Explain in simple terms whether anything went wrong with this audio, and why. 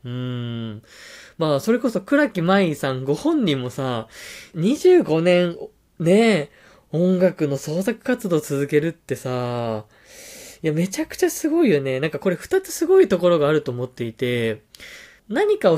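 Nothing went wrong here: the speech recording runs without any audible dropouts, distortion, glitches or level problems at any point.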